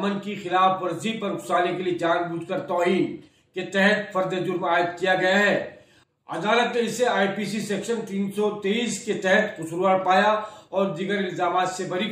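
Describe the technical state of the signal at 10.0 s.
At 10.0 s the signal is intact, with no audible dropout, distortion or other technical fault at that point.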